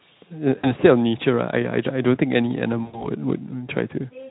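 A speech recording with VoIP packet loss concealed by the speech codec at 0.57–0.75 s and 2.83–3.09 s: about 60 ms and 100 ms of audio, consistent with three and five 20 ms frames, were rebuilt from the last pitch and filter, leaving stretched buzzy tones or coloured noise that fade as smeared streaks on a spectrogram and a decaying waveform envelope. The Speex coding itself adds only light coloration.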